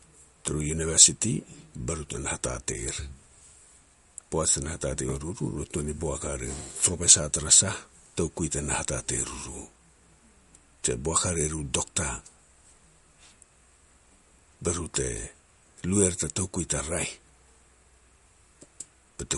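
Throughout the speech, likely MP3 compression: a spectrogram shows a flat ceiling at 11.2 kHz and flickering holes where weak components drop out, sounding watery and swishy, which fits roughly 48 kbps.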